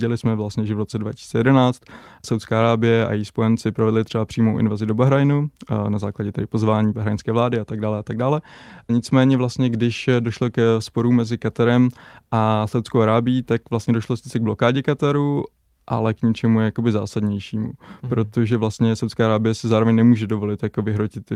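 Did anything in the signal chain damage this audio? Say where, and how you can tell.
No, nothing in the chain has audibly damaged this speech recording at any stage.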